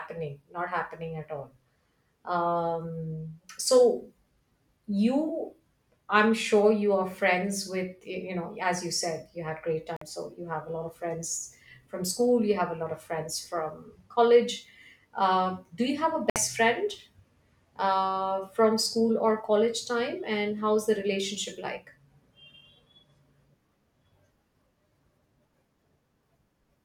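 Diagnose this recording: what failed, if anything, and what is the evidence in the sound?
Playback over the wireless link dropped out twice: the speech goes fully silent for about 50 ms at 9.96 to 10.02 s, after "said you had great" and before "so you have a", and for 60 ms at 16.30 to 16.36 s, after "do you have a". Each gap shows as a flat waveform and a clean full-band vertical blank on a spectrogram. The likely cause is a Bluetooth stall, where the receiving buffer ran empty while delayed packets were resent.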